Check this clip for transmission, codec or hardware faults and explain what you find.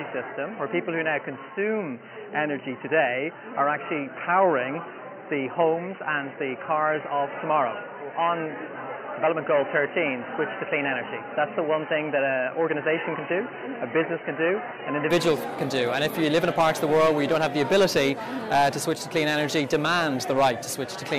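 One fault is present. From 0 to 15.1 s the sound is dull and boxy, with nothing above 3 kHz and a faint added noise floor roughly 30 dB down. The likely cause is an input switched to a poorer device, whose narrower band sets that ceiling. The clearer sound then returns with no gap or noticeable level jump.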